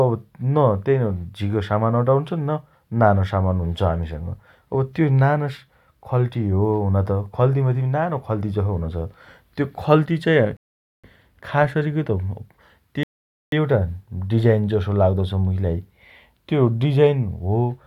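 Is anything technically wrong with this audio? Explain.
Yes, there are two rebuffering stalls in this speech. At 10.57 s the audio drops to silence until 11.04 s, and again from 13.03 s to 13.52 s, each about half a second. The player ran dry on downloaded data and paused until more came in. When it picks back up, the speech continues exactly where it stopped, so nothing is skipped, but each hiccup adds roughly 0.47 s and 0.49 s of dead air.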